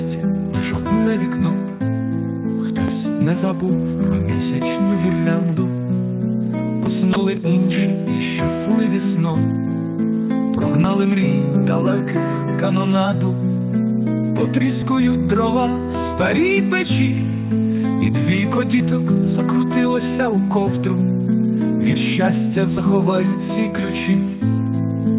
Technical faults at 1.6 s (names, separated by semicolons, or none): none